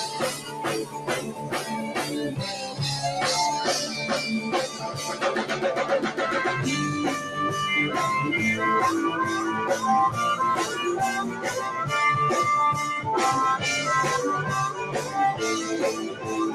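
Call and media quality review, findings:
Noise suppressor applied to music or sounds, running the whole clip. Level swings by roughly 10 dB as the speech-tuned suppressor treats steady content and tails as noise, so things pump and thin.

Sound cut by the noise suppressor at 0.34–0.62, 0.84–1.71, 4.68–4.91, 11.3–11.48, 14.87–15.15 and 16.08–16.29 s. Held or decaying parts sink by about 5 to 8 dB.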